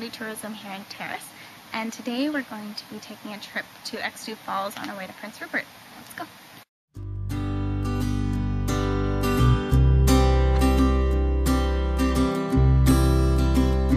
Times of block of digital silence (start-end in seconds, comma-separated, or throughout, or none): 0.94, 12.91